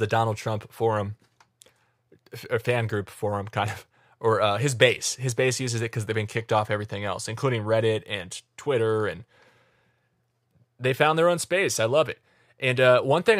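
The speech recording shows no technical faults anywhere in the signal.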